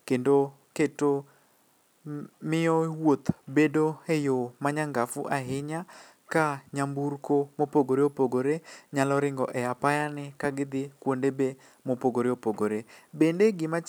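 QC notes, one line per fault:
No faults detected.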